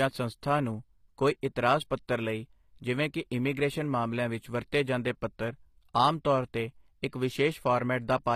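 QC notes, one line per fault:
Throughout, HE-AAC compression: the treble sounds grainy, s sounds come out gritty and lispy, and nothing sits above 15.5 kHz. Likely spectral band replication rebuilding the top from copied lower bands, consistent with roughly 24 kbps.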